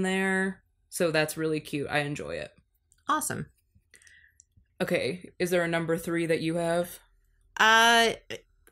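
Nothing stood out as a technical problem on listening to this speech recording.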